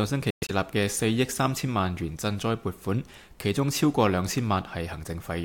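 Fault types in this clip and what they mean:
Bluetooth dropout: The sound cuts out in brief holes between 0.30 and 0.51 s, most likely because wireless packets arrived too late and were discarded. About 139 ms is missing across roughly 186 ms, the longest gap 116 ms, which suggests several lost frames in quick succession. The waveform drops to near silence. The spectrogram shows blank vertical bands at all frequencies, and the sound resumes further along, as if it had kept playing.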